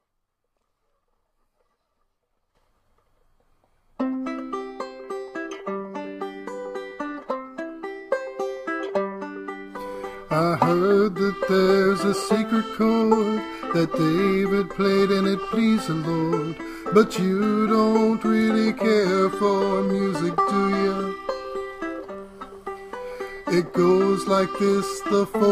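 Nothing in this one trips the ear as a technical fault at any point, so there's nothing to flag along its timeline.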